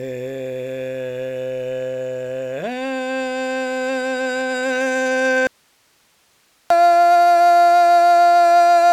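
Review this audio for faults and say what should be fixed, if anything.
At 5.47 s the music cuts off abruptly, leaving only hiss about 45 dB down until 6.70 s. This audio dropout to a faint residue likely stems from the source feed breaking while the downstream path stayed live. Secure cabling and monitor input level to prevent it.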